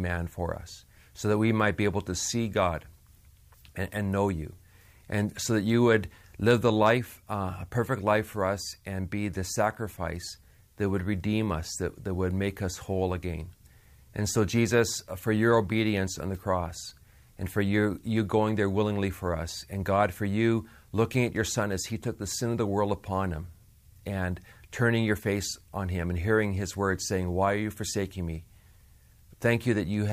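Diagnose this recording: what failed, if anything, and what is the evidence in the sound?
Nothing failed; no stage shows a fault anywhere here.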